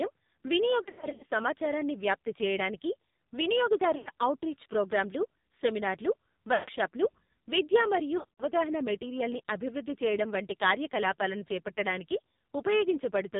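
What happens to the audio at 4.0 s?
From 3.98 to 4.09 s you get lost AMR speech frames: the decoder repeats the last good pitch and vocal tract settings while the gain sinks, so the sound smears, warbles and fades for roughly 80 ms, about four 20 ms frames, before "ఔట్రీచ్ ప్రోగ్రామ్లు సెమినార్లు" comes back. The AMR narrowband mobile codec is there too, cutting everything above 4 kHz, and its heavy buzzy, synthetic quality points to a low bitrate mode, around 5.9 kbps.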